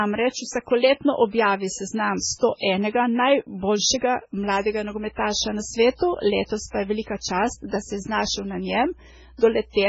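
From start to finish the speech carries heavy MP3 compression damage, likely from encoding at a very low bitrate, around 16 kbps. Nothing remains above about 7.7 kHz, so the top of the spectrum is cut off flat. With so few bits, weak frequency components are dropped and return from frame to frame, giving a watery, swirling texture, metallic chirps on s sounds, and smeared attacks.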